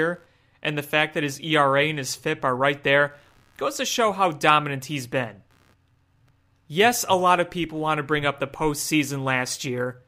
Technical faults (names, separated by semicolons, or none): computer activity noise